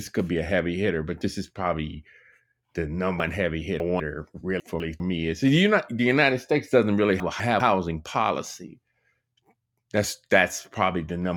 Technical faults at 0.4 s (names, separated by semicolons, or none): none